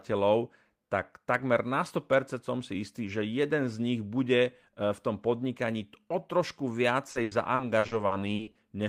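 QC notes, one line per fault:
7.11–8.58 s, repeated packet loss (robotic sound): the speech turns choppy as nine short holes, the longest about 80 ms, are each patched by stretching the preceding sound. About 400 ms is filled this way, roughly a quarter of the stretch.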